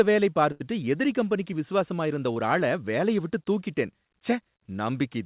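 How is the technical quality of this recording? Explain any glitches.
The recording has two packet-loss glitches, both in speech carried over a narrowband call line. Nothing reaches above 4 kHz, which fits G.711 mu-law at 64 kbps, so a spectrogram shows a hard ceiling there.

A burst of packet loss runs from 0.52 to 0.62 s. About 80 ms of speech never arrived. The receiver stretched the last sound across the hole for about 76 ms and faded it, so a held buzz or hiss dies away before speech resumes further on. On a spectrogram the last sound's pattern holds steady and dims. The waveform shows that sound continuing and shrinking.

A short concealed packet loss occurs from 2.34 to 2.38 s, where about 20 ms was lost. The decoder patched it by continuing the preceding sound and then crossfading back to the real signal, which is heard as a quick smear or wobble. A spectrogram shows a thin vertical slice where the fine detail briefly smooths out. 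In the waveform, the continued sound sits where the natural variation should be.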